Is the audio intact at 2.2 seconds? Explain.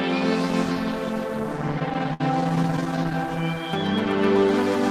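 No. 2.2 s lies within repeated stalls (stutter) from 1.79 to 3.15 s: the jitter buffer kept running dry, so the last sound was held over 23 gaps, up to 63 ms each, making the audio drag and stutter. A spectrogram shows frozen, smeared streaks; the waveform shows repeated, fading segments.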